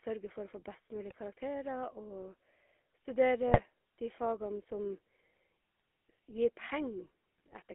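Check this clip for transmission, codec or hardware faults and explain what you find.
Yes, there are two problems: the whole clip has gone through a GSM full-rate codec, and there are four bursts of GSM bit errors.

The GSM full-rate codec runs throughout. The line is squeezed to roughly 250 Hz–3.5 kHz, and the speech has that buzzy, gravelly grit you get when a vocal-tract model is driven by sparse, regularly spaced pulses. It sounds like the 13 kbps full-rate coder, and the damage is plainly audible.

GSM bit errors show up at 1.09–1.15 s (right after "få best"), 3.47–3.60 s (just before "de fagene"), 5.80 s, and 7.38–7.55 s. Corrupted filter, pitch or gain parameters reach the decoder, so those frames squawk, pop and gargle briefly.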